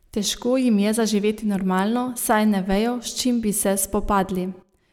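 Listening through the speech recording, nothing stood out as a technical problem at any point.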